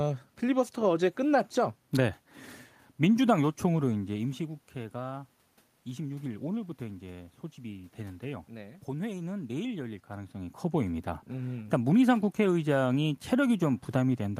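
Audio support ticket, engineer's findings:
Nothing stood out on listening to the speech recording; the level changes near 4 s and 10 s follow the talker's movement at the microphone, with room noise underneath.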